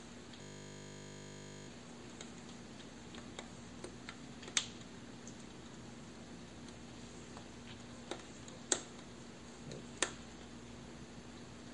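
A system hang loop runs from 0.42 to 1.68 s in this sound recording. A 20 ms slice repeats exactly, dozens of times, while the system is frozen, producing a steady 50 Hz buzz, which fits a short ring buffer. Essentially nothing is lost afterwards.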